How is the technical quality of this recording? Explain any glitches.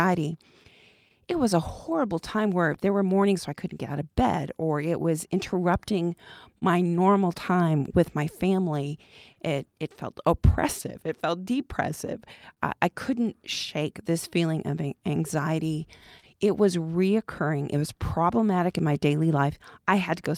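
The recording has timing glitches throughout, caused by a clock mismatch between the two ends of the link, plus a few brief stalls and scattered small gaps near the end.

Clock drift between sender and receiver runs through the whole clip. The sending side's audio clock is slower than the receiver's, by something like 2 percent. Because audio arrives a little more slowly than it is played, the jitter buffer keeps draining. The receiver has to make up the shortfall by stretching or repeating tiny pieces, so the speech never sits perfectly steady in time.

Repeated timing corrections run from 1.32 s to 19.17 s. The receiver plays at 99 percent speed, inserting repeated fragments that add up to roughly a third of a second over that span. All the edits push the same way, lengthening the audio, but they are unevenly spaced. Each one is small, so they come across as faint hiccups and a slightly uneven tempo rather than distinct clicks.

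There are short stalls from a late packet at 6.58 to 6.63 s, 9.33 to 9.37 s and 12.54 to 12.59 s. In each case a packet missed its playout time and the buffer ran dry. The receiver held the last sound for about 30 ms, 29 ms and 27 ms respectively, then resumed where it left off. Nothing is lost, but each moment has a slightly drawn-out sound with a faint buzz or dip.

Scattered short gaps appear between 15.73 s and 19.87 s. Around seven isolated packets went missing or arrived late. The receiver concealed each one by extending the preceding sound, filling roughly 70 ms in total, with the longest patch around 30 ms. That is only a small share of the stretch, so the speech stays clear, marked by brief ticks, smears or hiccups.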